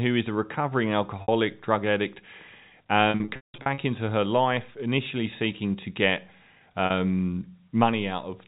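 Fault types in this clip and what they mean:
Packet loss with pitch repetition: lost stretches are patched by looping the last pitch cycle, seen as identical repeated waveform periods and frozen spectrogram harmonics, fading to silence within the 180 ms gap.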